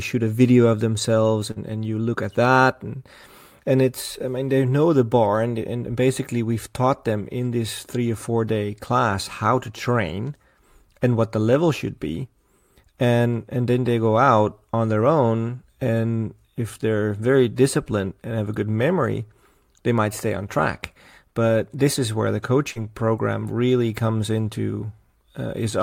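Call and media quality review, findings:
Burst of packet loss, 1.51–1.58 s, between "video of themselves" and "and you look at". Receiver jitter buffer and concealment: the last sound is held and fades over about 45 ms, then audio jumps ahead, about 40 ms lost.

Short concealed packet loss, 22.72–22.78 s, between "this is where the" and "program really comes". Decoder concealment: about 37 ms synthesized from the preceding sound, about 40 ms lost. Blends smoothly back into real audio rather than fading and then jumping.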